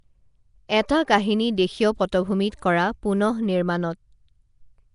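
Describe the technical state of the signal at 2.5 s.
At 2.5 s, as throughout, the speech carries a rough, hissy halo and a smeared, underwater quality, with nothing above about 10.6 kHz, likely from Nellymoser compression. Coarse coding leaves weak bands unallocated and noise-filled, which fits a rate near 44 kbps.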